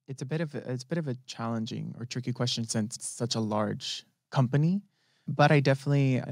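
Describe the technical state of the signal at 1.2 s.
At 1.2 s the signal is partway through an automatic gain rising, which runs from 0.18 to 3.47 s. The gain control judged the input too quiet and is ramping its gain up by about 10 dB in total, so the speech and the background noise floor swell together.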